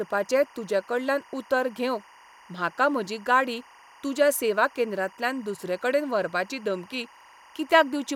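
Timecode bleed runs throughout, a chirping warble near 1 and 2 kHz well beneath the speech, fitting 24-frame code leaking from a neighbouring track; its rhythmic pitch-switching distinguishes it from steady hum.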